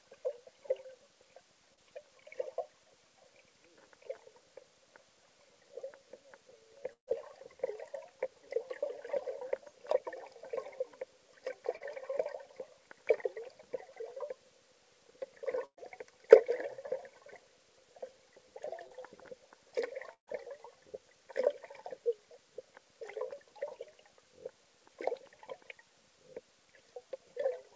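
Short concealed packet loss at 1.74–1.79, 11.77–11.82 and 18.87–19.00 s: about 40 ms of audio never arrived in time, so the receiver continued the preceding sound, leaving a brief smear. Burst of packet loss at 6.93–7.09, 15.66–15.79 and 20.13–20.29 s: 120 to 140 ms went missing, filled by extended sound that fades toward silence before the audio resumes further on. The G.722 call path limits everything to below 8 kHz.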